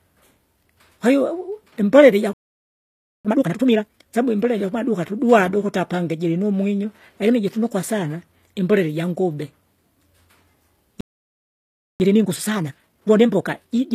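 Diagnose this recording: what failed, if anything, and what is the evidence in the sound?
The codec stage is where the damage starts. Sibilants and the top end sound gritty and metallic, and the treble doesn't sit in line with the harmonics below it. That points to HE-AAC compression, with spectral band replication rebuilding the highs from copied lower bands. The damage is plainly audible for the whole clip, which fits a low bitrate around 24 kbps.

Playback falls silent twice in mid-flow, from 2.33 to 3.25 s (about 0.91 s) and from 11.01 to 12.0 s (about 0.99 s). Each time the audio picks up again rather than cutting off for good. That's a playback stall, likely the player's buffer running dry or its thread getting blocked, so the output had nothing to play until it recovered.

Right after each gap the player rushes to clear its backlog. From 3.25 to 4.15 s the sound runs at 2x speed, and from 12.0 to 13.88 s at 1.5x, both at normal pitch. 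That's time-compressed catch-up. Small slices are cut out and cross-faded together to shorten the queue, which is where the hurried feel comes from.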